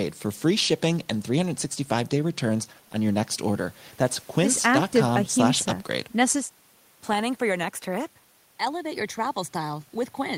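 No technical faults can be heard anywhere in this recording. The speech continues without any audible break or disturbance.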